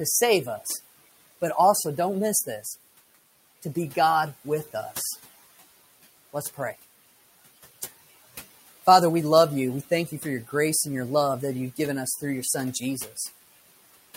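Speech over room noise, with noise suppressor artifacts running through the whole clip. The suppressor pulls the background down by about 16 dB, lowering the noisy bands frame by frame, so the room noise sits about 18 dB under the talker, dips away in the gaps and swells back up under the words. There are also two spots of speech cut by the noise suppressor, where it mistook the voice for noise and ducked it along with the background. From 10.07 to 10.25 s, roughly a tenth of a second of speech drops by up to about 7 dB, and from 12.73 to 13.19 s about 150 ms is pulled down by up to about 9 dB, so those soft bits sound swallowed and faint.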